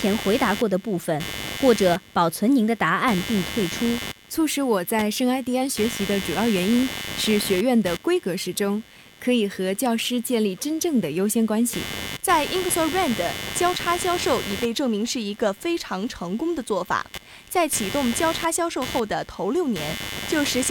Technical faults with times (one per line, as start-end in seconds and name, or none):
0.00-20.71 computer activity noise